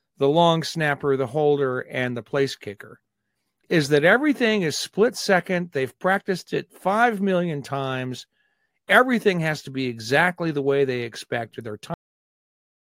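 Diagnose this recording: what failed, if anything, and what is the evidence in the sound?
The speech stops dead at 11.94 s, right after "they expect or their", dropping straight to digital silence with no decay. This is a cut-off end at the storage or buffer stage: the final buffers were never written, so the recording simply ends mid-sound.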